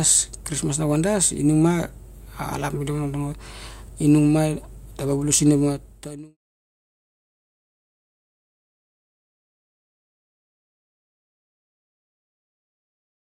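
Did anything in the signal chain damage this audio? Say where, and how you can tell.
No, nothing in the signal chain damaged this audio; the smooth fade-out from about 5.5 s to 6.37 s is an ordinary edit, not damage.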